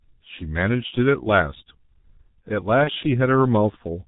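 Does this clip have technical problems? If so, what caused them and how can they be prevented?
Yes. The whole recording carries heavy G.723.1 codec damage. The speech is muffled, with nothing above 4 kHz, a hoarse texture and smeared consonants, which fits this codec running at roughly 6 kbit/s with its slow-updating voice model. A wideband codec at a higher bitrate would prevent it.

From 2.84 to 2.91 s there is VoIP packet loss concealed by the speech codec. The decoder stretched its last pitch and filter into a fading tail, and the weakened sound lingers briefly after recovery. This points to a single lost 30 ms frame. A better network path, forward error correction or a larger jitter buffer would prevent it.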